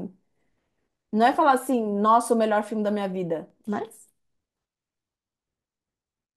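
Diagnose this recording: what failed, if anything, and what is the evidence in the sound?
CD scratch ticks run from 3.2 s to 5.0 s: seven short clicks at a steady spacing, roughly four per second, the longest only a couple of milliseconds. The fault lies at the storage and playback stage. A blemish on the disc passes under the laser once per revolution and corrupts more data than error correction can rebuild. The player then interpolates over or mutes those samples, leaving a brief tick in the speech on each turn.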